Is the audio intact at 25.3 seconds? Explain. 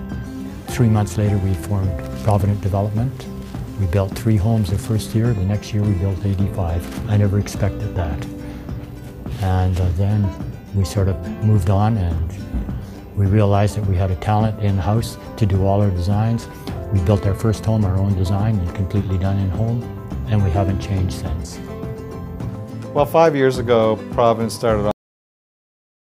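No, it isn't. At 25.3 seconds you're inside a cut-off end: the sound just stops mid-stream at about 24.91 s and stays in dead digital silence right through to the end. What's happened is the final stretch of buffers never got written out, so there's nothing there to play. You hear no decay or tail at all, just an abrupt drop from active audio straight to silence.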